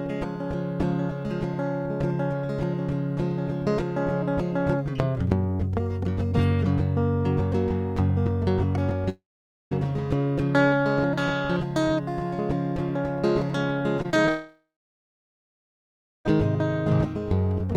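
At 9.09 s the music stops for about 0.62 s, likely because of a long network dropout in which no audio reached the receiver. The receiver stretches the last sound into a brief fading buzz, and then about 0.5 s of silence follows. The music resumes at 9.73 s with that stretch simply gone rather than delayed.

From 13.97 to 14.29 s, repeated packet loss leaves four short holes, the longest about 21 ms. Each hole is patched by extending the preceding sound, so roughly a fifth of this span is filled-in rather than real audio. Because the patches come in quick succession, the music turns choppy for about a third of a second.

Right after that, at 14.29 s, what is likely a second long network dropout begins and lasts until 16.27 s, cutting out nearly 2 s of music. A short concealment tail fades out, followed by about 1.6 s of silence. When the music returns, it picks up further along, with the lost passage never played.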